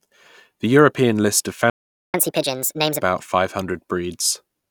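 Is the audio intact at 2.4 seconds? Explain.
No. At 2.4 seconds the speech is inside a catch-up at higher speed, running from 2.14 to 3.02 s, just after "list of". Following a stall, the player drains its backlog by resampling at 1.5 times normal rate, so the speech hurries and its pitch jumps up by roughly seven semitones before settling back. On a spectrogram, harmonics and formants shift upward and syllables compress in time; the waveform shows tightened, denser periods.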